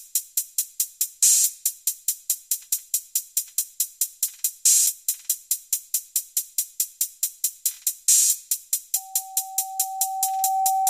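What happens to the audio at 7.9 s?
Nothing goes wrong at 7.9 s; the sound runs through that moment intact, with no dropout, click or other technical fault.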